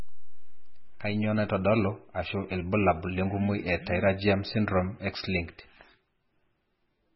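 A speech clip, likely squeezed through MP3 compression at a very low bitrate, which fits roughly 16 kbps, leaves nothing above 5.6 kHz for its whole length. The treble is cut off, weak frequency lines flicker in and out to give a watery, swirly texture, and consonant attacks sound smeared.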